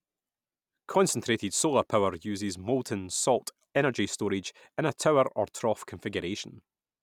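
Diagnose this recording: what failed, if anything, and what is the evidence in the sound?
Nothing failed; no faults heard.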